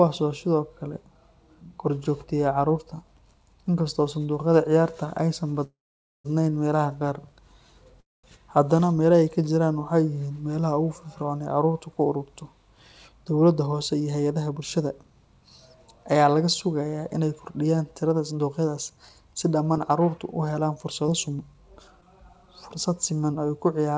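At 5.64 s the sound stalls for about 0.6 s, mostly silent (close to half a second of it), before resuming with "meelaha qaar". A shorter stall follows at 8.00 to 8.25 s, silent for about 0.2 s. Both are call audio freezes, likely from held-up packets draining the jitter buffer. Unlike a dropout, nothing is lost: the audio picks up exactly where it stopped, just later.

After "ku ururto", from 12.92 to 15.11 s, the jitter buffer speed-up plays the audio at 109% speed, trimming about a fifth of a second of pitch periods to cut excess delay. It sounds hurried but stays at normal pitch, unlike a sped-up recording.

A second speed-up starts after "laga sugayaa inay kordhiyaan" and runs from 18.13 to 23.95 s at 106%, removing about 0.4 s. The hurry is milder but sustained.

Inside that stretch, from 19.74 to 22.04 s, scattered short gaps appear: about four tiny holes, the longest around 15 ms, patched by extending the preceding sound. 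They come through as quick ticks or smears. Unlike the freezes, these are brief patches over audio that is actually missing, about 80 ms in all, with no pause before the sound continues. Throughout, nothing is heard above 8 kHz, which fits the G.722 codec of the call path.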